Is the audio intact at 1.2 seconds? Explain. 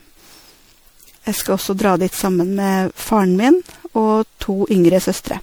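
No. At 1.2 seconds, as throughout the speech, there is generation loss: a swirly, hollow smear with blurred attacks, likely from around seven successive MP3 passes near 96 kbit/s. Each re-encode requantises on a shifted frame grid, stacking noise and spectral holes, so it sounds worse than one encode at that rate.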